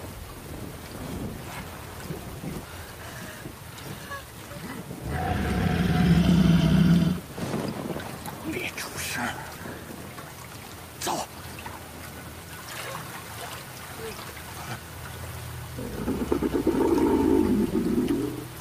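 No technical faults are audible.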